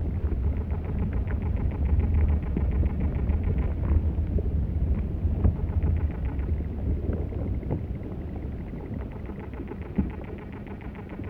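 No technical faults can be heard anywhere in the recording, and the signal holds steady throughout without any audible disruption.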